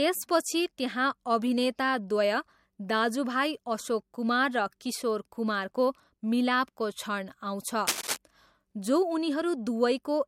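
A brief burst of scratching and rustling cuts across the speech from 7.87 to 8.17 s, lasting about 0.3 s and sitting only a few decibels below the speech itself, so it clearly intrudes. This is cable scratch noise, likely from a worn cable, connector or control being moved, where the contact resistance fluctuates rapidly and injects dense, irregular bursts of noise into the signal for as long as the movement lasts.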